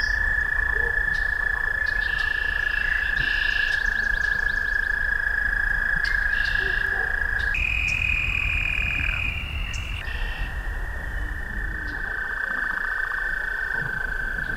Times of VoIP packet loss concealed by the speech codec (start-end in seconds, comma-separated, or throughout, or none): none